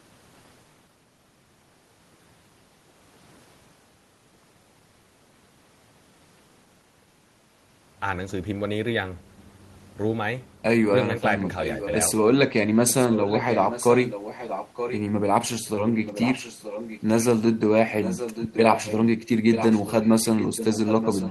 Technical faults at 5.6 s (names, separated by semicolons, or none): none